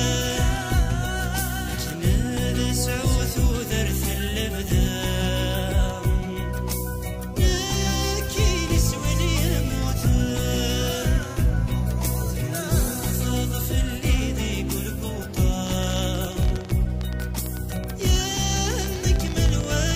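A train of clicks runs from 15.67 s to 19.94 s: some seventy sharp, similar ticks at about 14.3 per second, unevenly spaced and roughly 10 dB above the sound. This is likely interference from nearby equipment or a faulty connection or power supply.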